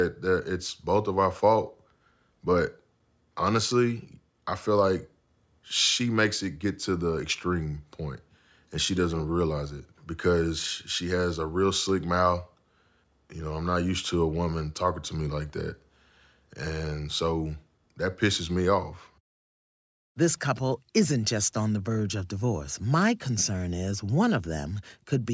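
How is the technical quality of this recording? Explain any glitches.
Nothing here calls for comment: the speech runs without a single glitch worth pointing out.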